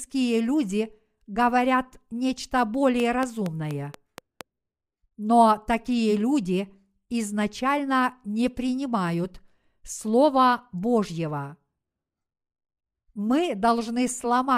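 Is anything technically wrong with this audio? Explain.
Yes. From 3.00 to 4.42 s, just after "люди говорят нечто", a train of clicks, around seven, ticks evenly at about 4.3 per second, peaking near 10 dB above the speech. Likely interference injecting pulses. A waveform shows regularly spaced sharp spikes, and a spectrogram shows thin vertical broadband lines.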